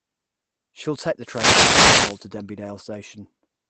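At 0.93 to 0.95 s, a lost packet rebuilt from error correction: one 20 ms packet went missing, and the Opus decoder filled the slot with the lower-bitrate copy carried in the following packet. There is no dropout, just a brief patch that sounds rougher and grainier. On a waveform the envelope stays continuous; on a spectrogram the 20 ms column looks smeared and noisier, with less defined harmonic structure than its neighbours.

From 1.20 to 2.28 s comes a wireless microphone noise hit. The FM radio link faded as reflected signals cancelled, so receiver noise surged over the sound for about a second, heard as a swish of static. A spectrogram shows a broadband hiss rising across the band, reaching up to the 8 kHz limit of the Opus call path, and partly masking the speech harmonics. In the waveform the noise floor thickens over that span, and any clicks appear as sharp spikes.

At 2.59 to 2.61 s there is a second lost packet rebuilt from error correction. 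Again a single 20 ms packet was replaced by its low-bitrate backup copy, with no gap but a momentary rough, noisy texture. It appears as the same short smeared column on the spectrogram.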